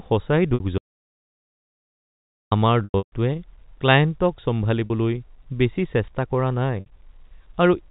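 At 0.54 s, packet loss with pitch repetition blanks about 60 ms of speech, which fits three lost 20 ms packets. The receiver fills the hole by looping the last pitch period, so the sound briefly holds on a steady, slightly buzzy tone before the live signal resumes. The same concealment recurs at 2.84 s, 4.86 s (40 ms) and 6.80 s (60 ms). The 2.84 s event is the worst. About 240 ms goes missing in bursts spread over roughly 280 ms, with a longest run of 140 ms. That run is long enough for the repeated cycle to fade toward silence before the speech cross-fades back in near 3.12 s. The speech sits within the narrow G.711 telephone band, which stops at 4 kHz.

From 0.78 s to 2.51 s, an audio dropout to silence removes about 1.7 s. The signal cuts off mid-flow and returns just as abruptly. The gap is silent, with no room tone or line noise, and nothing is concealed. Silence this complete most likely comes from the input path failing or being muted while the encoder kept writing empty samples, and whatever was said during that interval is lost.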